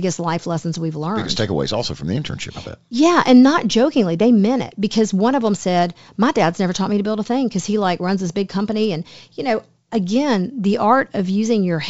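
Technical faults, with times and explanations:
No technical faults are audible in this speech clip.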